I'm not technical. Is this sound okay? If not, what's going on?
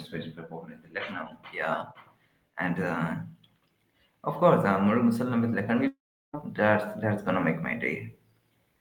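No. From 5.23 to 7.58 s, automatic gain rising: the recording's volume control gradually turns itself up, so the speech and background both swell louder. At 5.87 s a long network dropout likely occurs: the sound turns into a fading buzz or hiss, goes quiet, then resumes at 6.35 s with about half a second missing.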